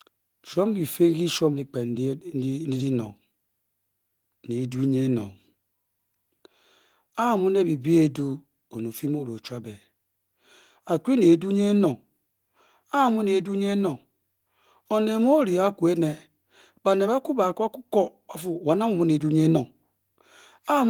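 No faults found; the speech runs through Opus at 24 kbps in hybrid mode with fullband coding in 20 ms frames, keeps content up to about 20.2 kHz, and shows only light codec coloration.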